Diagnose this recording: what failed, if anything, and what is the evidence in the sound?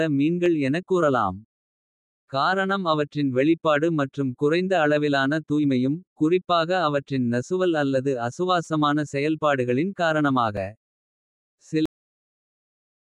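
At the driver or buffer stage, new audio arrived late and the last short buffer replayed, consistent with a 256-sample buffer of about 5.8 ms. These repeated buffers sound as a click at 0.46 s before "எனக் கூறலாம்", a brief buzz at 8.65 to 8.67 s after "குறிப்பாக அவற்றின் நசுவல் அல்லது", and a click at 10.57 s.

At the storage or playback stage, the final buffers were never written, giving a cut-off end. At 11.86 s the speech stops mid-sound and drops straight to digital silence with no decay.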